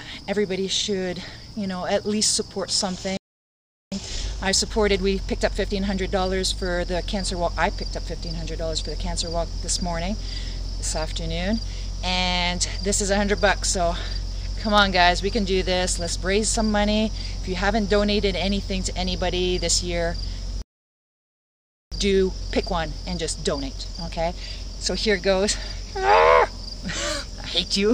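The audio suffers two playback stalls, at 3.17 to 3.92 s (about 0.75 s) and 20.62 to 21.92 s (about 1.3 s), where the sound cuts dead in mid-flow and then resumes. The likely cause is the player running dry or its thread being blocked. On a waveform and spectrogram each stall shows as a flat, empty gap. Each stall is followed by time-compressed catch-up, from 3.92 to 6.92 s at 1.15 times speed and from 21.92 to 24.92 s at 1.25 times speed. Here the player trims its backlog by dropping and cross-fading short slices, so the sound is hurried at unchanged pitch. A spectrogram would show normal frequencies with events packed closer together in time.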